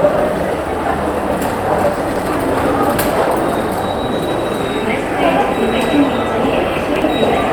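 Chunks out of order, at 1.98 to 2.22 s and again at 6.78 to 7.02 s: a 60 ms chunk of the sound arrived three chunks late and played after those meant to follow it, so each span comes out jumbled, with three hard joins.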